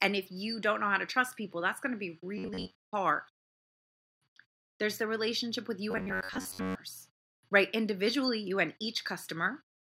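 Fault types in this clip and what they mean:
Robotic sound from repeated short buffers: new audio was likely arriving too seldom, so playback kept repeating its last slice instead of the skipped material. That slice points to a buffer of about 11 ms, and its repetition forces a rigid, metallic 93.8 Hz buzz onto the speech, which only loosely follows the words. Most of the sound is replaced from 2.38 to 2.83 s and again from 5.91 to 6.75 s, right after "the relationship with you".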